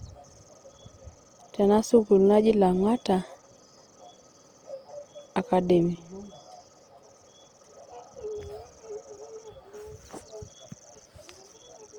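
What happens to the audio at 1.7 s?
At 1.7 s the speech is going through the same damage heard across the whole clip, likely from Opus compression running in its CELT music mode at a low rate that fits about 24 kbps. With too few bits, the encoder keeps each band's energy but fills the detail with folded or noise-like content, so the speech sounds grainy and rough, with a noisy texture. Bandwidth stays full, reaching about 20.1 kHz.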